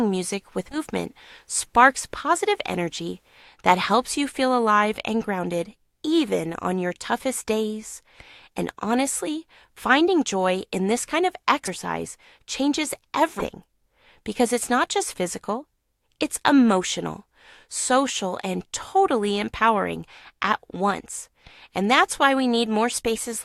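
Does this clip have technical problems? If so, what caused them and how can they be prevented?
Yes. Compressed frames are skipped at 0.71–0.78 s and 13.39–13.46 s. Whole 20 ms frames go missing, so the sound jumps ahead about 100 ms, then 200 ms. Verifying file integrity and resending damaged data would prevent this.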